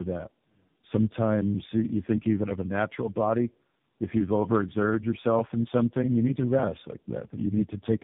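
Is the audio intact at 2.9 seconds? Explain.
No. Tandem speech coding runs through the whole clip, including 2.9 s: the sound fits about three speech codecs in a row, each re-encoding the last one's damage. The speech is rough, muffled and warbly, with nothing above 3.8 kHz.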